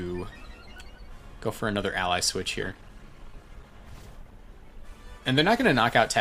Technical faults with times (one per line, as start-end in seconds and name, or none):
2.63-6.20 call bitrate drop